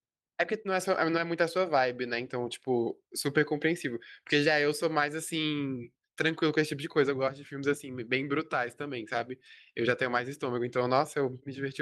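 Nothing in the speech here counts as a technical fault, so there's nothing to point to at any moment in the recording.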